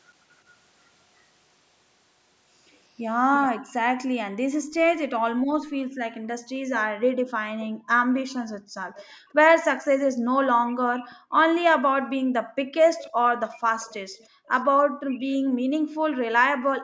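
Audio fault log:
3.34–3.49 s, 8.15–9.31 s, 11.03–11.43 s, 12.85–15.37 s, echo leak: a faint copy of the speech trails the original by 341 ms, most likely because a far-end loudspeaker's sound reached its microphone and the echo canceller left a residue. The first scrap is strongest, about 15 dB below the speech; the later ones sit around 25 to 30 dB down. On a spectrogram the harmonic patterns repeat 341 ms later as fainter, patchy duplicates, and the waveform shows small ghost bursts where the echo comes back.
3.52–4.39 s, 5.33–13.31 s, 14.3–16.83 s, background gated by the echo canceller: the room sound repeatedly sinks, at its deepest by about 40 dB, then returns, because the canceller clamped the microphone while the loudspeaker played. The drops total roughly 0.4 seconds in the first span, about four seconds in the long middle span, and about a second and a half at the end. A spectrogram shows the noise floor blanking to near-empty patches, and the waveform's low-level background flattening abruptly.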